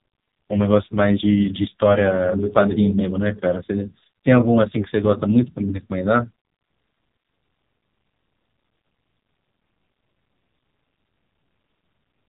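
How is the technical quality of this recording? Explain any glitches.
The technical quality is poor: the whole recording has been through an AMR narrowband mobile codec at a low rate, so it sounds like a heavily compressed phone call.

From start to finish, nothing above about 3.8 kHz survives, leaving the speech muffled and boxy. AMR-NB rebuilds each 20 ms frame from a vocal-tract model excited by a handful of pulses. At the rate this damage suggests, probably around 5.9 kbps, those pulses are too sparse, so the voice comes out buzzy and synthetic, with a coarse, processed edge throughout.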